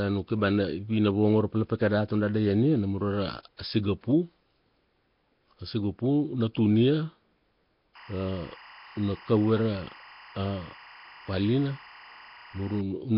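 Throughout, the speech has a rough, hissy halo and a smeared, underwater quality. Nothing is heard above 5.3 kHz. The damage is heavy. The likely cause is Nellymoser compression, which codes fixed blocks and fills weak bands with noise, at a rate that fits about 22 kbps.

From 7.95 to 12.81 s, timecode bleed appears. Linear timecode has leaked in from a neighbouring track or cable. Its square wave flips between roughly 1 kHz and 2 kHz. It sits about 25 dB below the speech as a steady chirping warble, consistent with 23.976-frame code.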